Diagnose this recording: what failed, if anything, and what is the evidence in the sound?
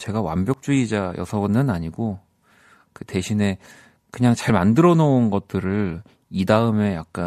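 The failure is in the streaming and playback stage: an overlap between stream segments. You can hear three tiny skips, at 0.54, 4.50 and 6.48 s. They line up with a 2 s segment grid. Each time, adjacent segments claimed overlapping timestamps, and the player trimmed that overlap even though the speech wasn't actually duplicated. A few milliseconds of real audio get dropped, and the waveform jumps across the gap.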